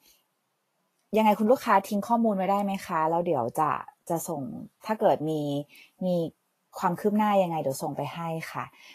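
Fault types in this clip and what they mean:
Vorbis compression: The speech sounds grainy and hissy throughout. The top end stops sharply, with nothing above 14.2 kHz. Below that cut-off the treble sounds rough rather than detailed. Fine high-frequency structure has turned into noise of similar loudness. Consonant attacks are blurred and tones sound coarse. The damage is plainly audible. The likely cause is low-quality Vorbis coding, and the degree of roughness fits a rate around 32 kbps.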